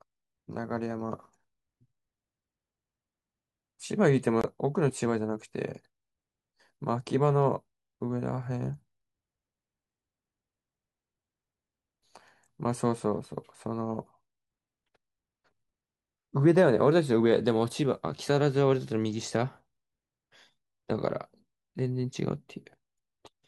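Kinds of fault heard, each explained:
Bluetooth dropout: at 4.41 to 4.46 s the speech cuts to silence for about 23 ms, then carries on as though it had kept playing underneath, so a sliver of sound is simply missing rather than delayed. The likely cause is audio data arriving too late at the wireless headphones and being thrown away; a hole this short fits a single lost packet, after which the next good one restores the output.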